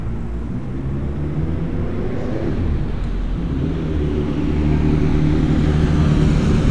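A recording of sounds has a wrong sample rate fault from 0.0 to 2.32 s. The samples play back slower than they were captured, which fits 24 kHz material clocked out at 22 kHz, so the sound runs at 0.919 times speed and drops about 1.5 semitones in pitch.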